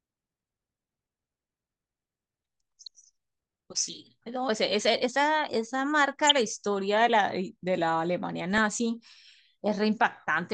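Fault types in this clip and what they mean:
DAB burbling: Bit errors slip past error correction into the audio data, so single sub-bands jump in level. Here the speech burbles in three brief bursts.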